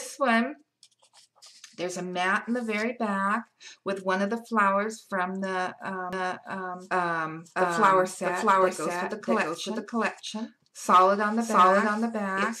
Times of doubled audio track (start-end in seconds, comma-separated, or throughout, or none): 6.13-12.60